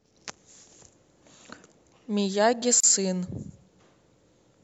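Separately encoded pieces of this speech clip were joined without trimming the encoder's start delay and end padding, leaving a gap at a join of encoded pieces: a 34 ms silence from 2.80 to 2.84 s, smeared at its edges, before the speech resumes where it stopped.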